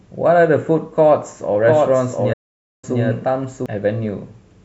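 From 1.66 s to 3.66 s a doubled audio track appears: a second full-band copy of the speech runs roughly 0.7 s behind, about 5 dB quieter, likely from a slower capture path. Unlike an echo, it has no decay or room colour and switches on and off abruptly.

From 2.33 s to 2.84 s a playback stall silences the output for about 0.5 s, likely because the player ran short of data.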